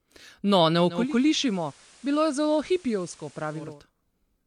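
At 0.83 s the receiver loses the digital stream and takes about 340 ms to blend across to the FM analogue feed. The level drops about 4 dB, and hiss sits roughly 25 dB down until it blends back at 3.84 s.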